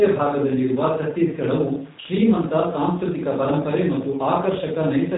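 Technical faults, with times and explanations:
Throughout, G.729 codec: the speech has been squeezed through a low-rate voice codec, consistent with an 8 kbit/s G.729-family coder, which discards the waveform and rebuilds it from a vocal tract filter, a pitch predictor and a few coded pulses per frame. Everything above 3.8 kHz is gone, so the speech sounds dull and boxed-in, and the resynthesis leaves a plainly audible rough, buzzy, slightly synthetic texture on every syllable.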